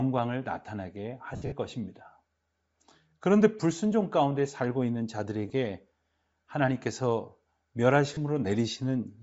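Bluetooth LC3 compression runs through the whole speech clip and is plainly audible: the upper spectrum sounds thinned and replaced with a grainy, breathy hiss. This is likely the LC3 codec of Bluetooth LE Audio working at a low rate, and the coarseness fits about 32 kbps with 10 ms frames. At that rate the encoder drops much of the high-frequency detail and the decoder fills the gap with shaped noise.

Lost LE Audio frames occur first from 1.34 to 1.52 s, where 140 ms of audio goes missing in gaps scattered over 180 ms. The longest gap lasts about 70 ms. The decoder covers each gap by repeating the last spectrum with randomised signs, so the speech turns into a noisy smear and fades during the longest gap. Two shorter losses follow, 20 ms at 5.48 s and 30 ms at 8.14 s, each heard as a brief grainy blur.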